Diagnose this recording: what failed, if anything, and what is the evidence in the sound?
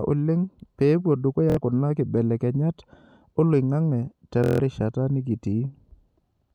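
The wireless link failed with Bluetooth stutter in two places. Just after "oleng pee epuo", from 1.50 to 1.57 s, a short slice of speech repeats as a rapid buzz for about 70 ms before "kuna kibelekenyat" resumes. A longer machine-gun run follows from 4.44 to 4.60 s, about 160 ms. The receiver kept replaying its last buffer while packets were missing, then jumped ahead. Because the gap is filled with looped audio rather than silence, it is not a plain dropout or buffer underrun.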